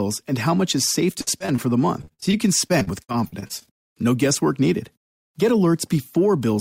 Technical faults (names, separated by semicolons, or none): repeated packet loss (robotic sound)